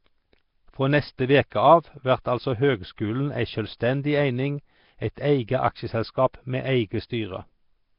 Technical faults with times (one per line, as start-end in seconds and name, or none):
0.00-7.99 Nellymoser compression